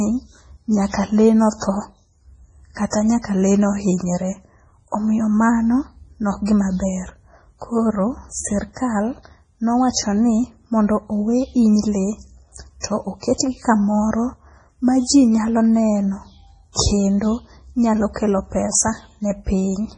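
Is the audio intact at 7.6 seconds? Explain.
No. At 7.6 seconds, as across the whole clip, the speech shows damage that is likely from MP3 compression at a very low bitrate, consistent with about 24 kbps. Short of bits, the encoder removes everything above 10.4 kHz and drops weak frequency lines that switch on and off between frames. The speech sounds dull and watery, with a swirling, metallic edge on s sounds and smeared onsets.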